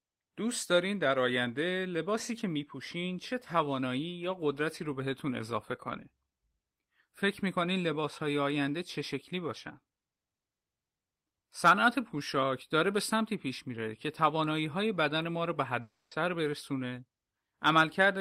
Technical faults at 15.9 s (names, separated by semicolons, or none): long network dropout